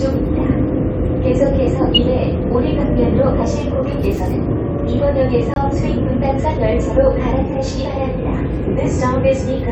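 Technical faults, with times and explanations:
5.54 to 5.58 s, corrupt frame muted: the decoder rejected damaged compressed data and the player substituted silence, cutting an abrupt 38 ms hole that fits two lost frames.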